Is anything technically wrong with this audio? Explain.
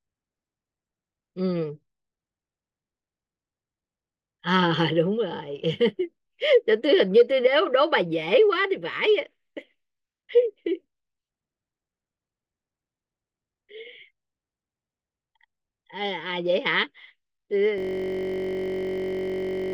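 Yes. From 17.78 s to the end of the clip there is a system hang loop. The computer or audio driver stopped supplying new data while the sound hardware kept replaying the same ring buffer. A 21.33 ms slice, which fits a 1024-sample buffer, repeats exactly over and over at 46.9 Hz. Because the loop is so short, the speech gives way to a steady, low, mechanical buzz at that rate, holding until the audio stops.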